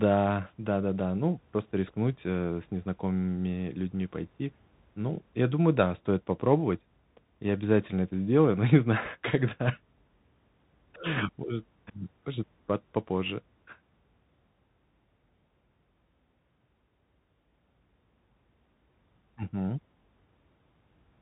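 Speech, carried over a Bluetooth CVSD headset codec for the whole clip. Nothing above 4 kHz gets through, so it sounds narrow and boxy. The damage is plainly audible: a granular hiss sits underneath, s sounds turn scratchy, and loud bright syllables break up. This fits a 64 kbps CVSD link. At 2.17 s there is unconcealed Bluetooth headset packet loss. A hole of about 3.8 ms drops out with hard edges, which fits a single lost packet. The speech returns briefly quieter as the codec's step size recovers.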